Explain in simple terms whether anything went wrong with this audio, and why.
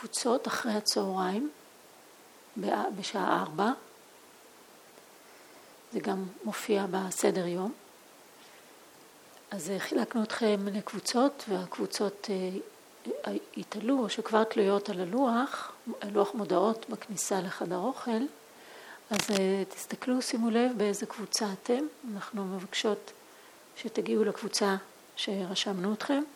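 Between 19.13 and 19.38 seconds, a rough scratching burst lasting about a quarter of a second sits on top of the audio, fairly loud, only a little quieter than the sound itself. This is cable scratch noise, most likely from a worn cable, plug or knob being moved. Unlike a single digital click or dropout, it is a dense, uneven cluster of rustling noise that keeps crackling for as long as the contact is disturbed.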